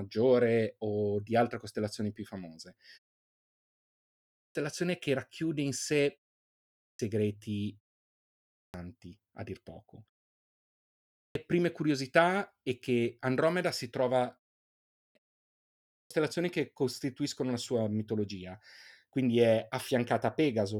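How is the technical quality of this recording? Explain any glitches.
The recording has one recurring glitch: speech onsets are chopped off after pauses.

Clipped start after a pause occurs at 3.92–4.55 s (before "che racchiude in sé"), 6.41–6.99 s, 8.12–8.74 s (before "a dir poco"), 10.76–11.35 s (before "prime curiosità è che"), 14.61–15.15 s and 15.47–16.11 s. During silences of 0.3–1.0 s, the output device sleeps and needs about 0.54–0.64 s to wake, so each phrase bursts in abruptly, missing its opening sounds.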